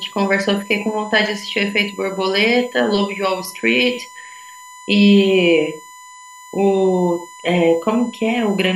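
USB whine runs through the whole of this speech clip as a steady 1 kHz tone, strongest at that pitch and sitting roughly 25 dB below the speech. Current drawn by the USB bus in 1 ms frames is leaking into the audio through shared power or ground.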